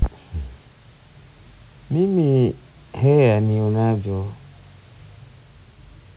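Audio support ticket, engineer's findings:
No faults found in the speech recording. The call path's band limit at 4 kHz is audible and fits a G.711 mu-law codec, with room noise sitting about 37 dB below the speech.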